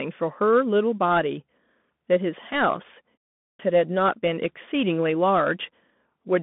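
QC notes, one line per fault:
Throughout: Bluetooth CVSD headset codec. The speech is confined to a narrow telephone band, roughly 150 Hz to 3.5 kHz, with nothing above 3.8 kHz. The one-bit, 64 kbps delta coding leaves a plainly audible granular hiss beneath the speech, scratchy sibilants, and slope-overload distortion on loud high components.
3.47 to 3.59 s: clipped start after a pause. After a silence of about 0.38 s, the output path needs time to wake and relock, so roughly 124 ms at the onset is swallowed. The speech resumes abruptly out of silence, missing its initial sounds.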